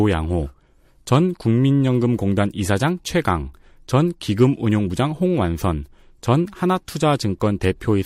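No technical faults can be heard anywhere in the speech recording.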